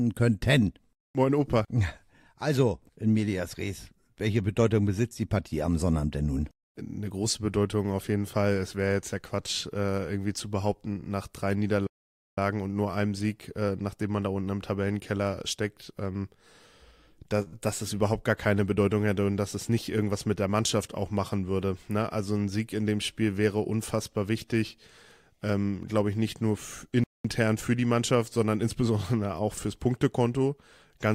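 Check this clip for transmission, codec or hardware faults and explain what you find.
Four kinds of fault turn up: two playback stalls, a short stall from a late packet followed directly by a short concealed packet loss, and a stretch of jitter buffer speed-up.

The playback stalls come at 11.87 to 12.38 s, about half a second, and at 27.04 to 27.25 s, about 0.21 s. The sound cuts out in mid-flow and then resumes. The likely cause is the player running short of data or its output thread being blocked. On a waveform each shows as a flat gap; a spectrogram shows a clean vertical band of empty time.

The short stall from a late packet sits at 17.42 to 17.48 s. A packet missed its slot, the jitter buffer emptied, and the receiver held the last sound for 40 ms until the packet arrived, so playback ended up 40 ms later. The held portion is drawn out, with a slight buzz or dip. On a spectrogram the harmonics run flat and unchanging for that span, and the waveform repeats nearly identical cycles.

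The short concealed packet loss follows at once, from 17.48 to 17.54 s. Here 40 ms of audio never arrived, and the receiver bridged the gap with 42 ms of synthesised continuation before blending back into real audio. It comes across as a brief smear or wobble. On a spectrogram the detail goes soft and blurred for a moment.

The jitter buffer speed-up runs from 19.56 to 20.13 s. The receiver was holding more audio than its target, so it trimmed short pitch-period-length pieces repeatedly, about 50 ms in total. This plays the passage roughly 6% fast at unchanged pitch, which sounds hurried. On a spectrogram the harmonics keep their spacing while events crowd closer in time, and the waveform shows small splice points between cycles.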